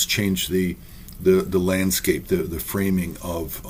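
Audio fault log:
Throughout: clock drift between sender and receiver. The sending end's clock is running roughly five percent fast, so audio keeps arriving quicker than the receiver plays it out. The jitter buffer keeps creeping fuller, and the receiver has to keep trimming to stop it overflowing.
0.21 to 3.63 s: repeated timing corrections. Here the receiver keeps snipping out short pieces to soak up that 5% surplus, all in the same direction but at uneven spacing. Each cut is small, so it comes across as faint hiccups and a slightly unsteady, hurried pace.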